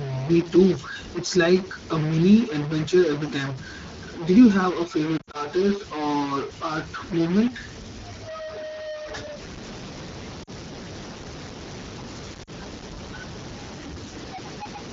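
Throughout the speech, one data bit appears stuck at a fixed value, which is the likely cause of the damage. Roughly half of all sample values are pushed off by that bit's weight in a pattern that follows the waveform. The stuck bit is heard as distortion riding on everything. Because the bit also flips relative to the sign of small values, the pauses fill with a steady noise floor instead of falling silent.

From 5.18 to 5.36 s, between "you have a" and "or art movement", lost AMR speech frames break the signal. About 100 ms of frames failed their checksums and were scattered across 160 ms, with the longest unbroken gap at 60 ms. The decoder bridged each gap by reusing the last good pitch and vocal tract settings at falling gain. The sound warbles and drops to near silence, then comes back briefly rough. Shorter losses of 40 ms each, at 10.43 to 10.50 s and at 12.43 to 12.50 s, give quick dips.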